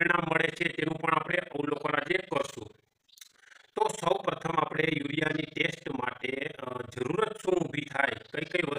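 Throughout the audio, the level pumps up and down around twenty times a second with a swing of about 60 dB, producing a harsh, rough flutter that never lets up. This is overlap-add ripple: the signal was split into windowed frames and reassembled with an overlap whose windows fail to sum to a constant gain, so each frame boundary dips deeply. On a waveform the envelope appears chopped into regular lobes; a spectrogram shows evenly spaced vertical stripes at that frame rate.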